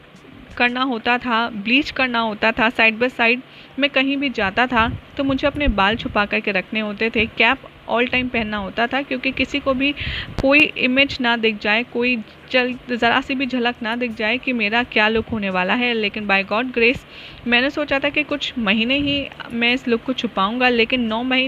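Loud pops hit the audio at 5.68–5.72 s and as a double pop at 10.39–10.64 s, jumping well above the sound, likely from sudden voltage spikes such as a switch or plug.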